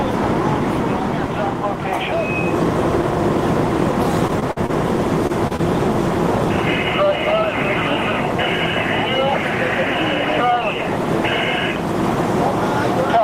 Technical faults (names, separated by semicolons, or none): repeated packet loss (robotic sound); short concealed packet loss